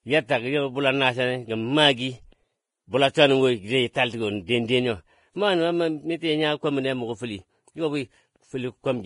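Throughout the speech the treble sounds hissy and grainy, with nothing above 10.5 kHz and blurred consonant attacks, likely from heavy Vorbis compression at a low bitrate around 29 kbps.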